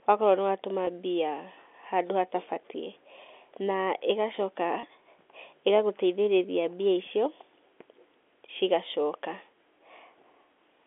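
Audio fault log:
0.85–0.87 s and 4.81–4.83 s, packet loss with pitch repetition: about 20 ms missing each time, likely two lost packets. The first comes just after "akorwo nĩ watũma". The receiver repeats the last pitch period to fill each gap, so the sound briefly holds with a slightly buzzy tone.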